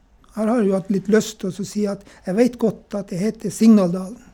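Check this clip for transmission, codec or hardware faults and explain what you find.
No transmission, codec or hardware fault is audible anywhere in the speech.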